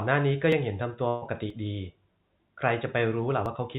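Speech, carried over a call path whose band stops at 4 kHz, consistent with G.711 mu-law at 64 kbps, has two kinds of fault. Audio missing between chunks shows up as abrupt skips at 0.52, 1.50 and 3.46 s, each losing about 20 ms, with the two sides butted together with no silence. The likely cause is a recorder handling audio in blocks of roughly a second and dropping a sliver at each handover. On a waveform each skip is a sudden jump in the trace where the cycles don't line up. On a spectrogram it appears as a thin vertical seam where the harmonics step without a gap. A burst of packet loss runs from 1.08 to 1.24 s. About 140 ms of real audio is gone, and the receiver filled the gap by stretching the last sound and letting it fade rather than going silent. A spectrogram shows the held sound dimming across the gap, and the waveform shows a decaying pattern. Both then resume abruptly with later material.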